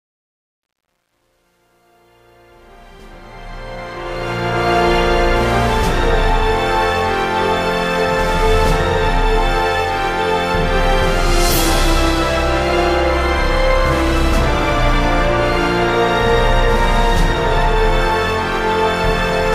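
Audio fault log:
0.0–4.70 s, truncation distortion on a fade: the fade-in, rising from the start, is held to 10 bits without dither, so its quiet part, worst to 3.25 s, sounds gritty. The waveform shows square steps; the spectrogram shows broadband grain.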